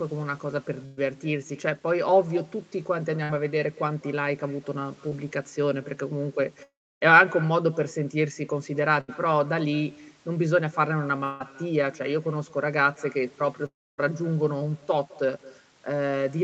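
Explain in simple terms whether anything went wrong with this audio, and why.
Echo with no canceller runs throughout: the speech returns as a faint, hollow copy about a fifth of a second later, picked up from the other side's loudspeaker.

Bursts of packet loss at 0.85–0.99, 3.23–3.31 and 9.01–9.10 s replace an eighth of a second or less with a fading held buzz or hiss before the speech jumps ahead.

Short concealed packet loss at 5.09–5.13 s makes a brief smear where a sliver of speech was patched over.

At 6.63–7.03, 11.24–11.42 and 13.66–14.00 s, the sound fades into a buzz or hiss, and at the first and last of these it then drops to silence. The speech resumes with a piece missing, likely from a long network dropout.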